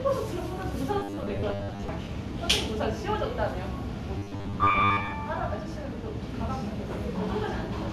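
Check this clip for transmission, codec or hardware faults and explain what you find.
Two stretches of robotic sound from repeated short buffers, at 0.99–1.88 s and 4.18–5.14 s: a rigid 100 Hz metallic buzz, likely from 10 ms chunks being looped in place of missing audio. About half the first stretch and most of the second is repetition. On a spectrogram this appears as evenly spaced harmonics at 100 Hz intervals. The waveform shows an identical 10 ms shape repeating.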